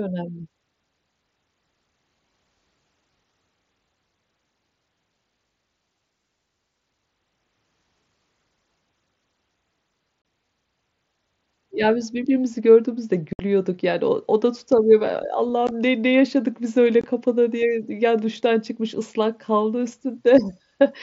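Unconcealed Bluetooth headset packet loss hits the speech four times. Gaps open at 10.22 to 10.25 s, 13.33 to 13.39 s, at 15.67 s, and at 17.01 to 17.04 s. They last 30, 60, 15 and 22.5 ms. Packets between headset and phone went missing. Nothing filled them, so silence or an idle pattern replaced the voice. Each hole has hard edges and can click. The wideband mSBC link carries speech up to 8 kHz, with a light grain.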